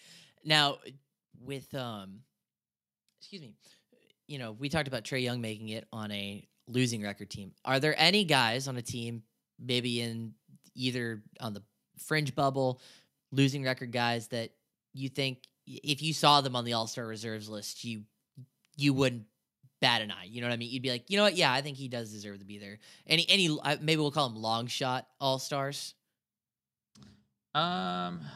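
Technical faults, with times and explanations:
0.37 to 1.52 s, automatic gain falling: the gain control judged the input too loud and cut its gain by about 5 dB, so speech and background sink together.
1.46 to 11.36 s, automatic gain rising: the control then judged the input too quiet and slowly raised its gain by about 10 dB, swelling speech and background together until "on the".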